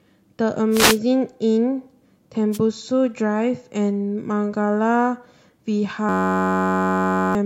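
A speech recording with two kinds of fault. Two wireless microphone noise hits, at 0.71–0.98 s and 2.52–2.59 s, come through as brief swishes of static over the voice: the FM radio link fades as reflected signals cancel, and receiver noise rises to mask the audio. From 6.09 to 7.35 s a system hang loop replaces the speech with a steady buzz at about 94 Hz. A 10.67 ms fragment, consistent with a 512-sample buffer, repeats while the host stalls, so about a second and a half of audio is lost.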